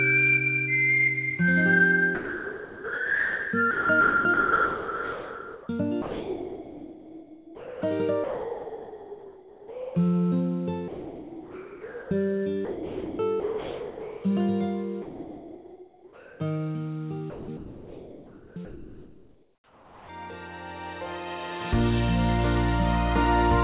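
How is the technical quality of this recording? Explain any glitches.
The recording is held back mainly by a voice detector in the transmission path that repeatedly gates the sound. The audio also tops out at 4 kHz, consistent with a narrowband call codec such as G.711.

From 2.15 to 5.69 s, 12.65 to 14.24 s and 17.3 to 20.09 s there is sound chopped by the voice detector. The sender's detector kept switching transmission on and off, most likely because it misjudged quiet passages. Quiet portions and edges are replaced by synthetic fill, so the sound turns choppy.

Sound dropped by the voice detector occurs from 6.02 to 7.82 s, 8.24 to 9.95 s and 10.88 to 12.11 s. The detector likely judged real sound as background and stopped sending. In each case roughly a second or more of sound gives way to steady noise until transmission resumes.

From 15.02 to 16.4 s there is comfort noise in place of the background. 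With nothing being sent, the receiver likely generated synthetic noise to fill the gap. The detailed real background becomes a flat, featureless hiss about 2 dB quieter.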